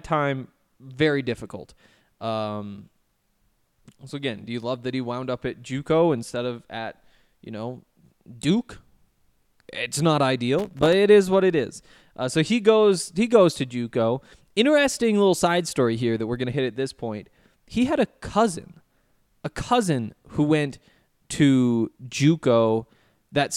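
At 10.59 to 10.93 s, just before "it is what it", loose connector crackle breaks into the speech: a worn contact rapidly making and breaking chops the signal into an irregular scratchy burst. The waveform shows ragged dropouts and spikes; the spectrogram shows scattered broadband vertical streaks.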